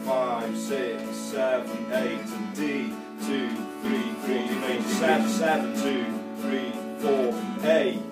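From 3.85 s to 5.89 s there is a doubled audio track. A second full-band copy of the sound runs behind the original by around 400 ms. It is about as loud as the original. The copy has no decay and no room colour, so it sounds like a plain repeat rather than an echo. It cuts in and out abruptly at those times. The likely cause is a second capture through a slower path, or an edit holding two copies out of step.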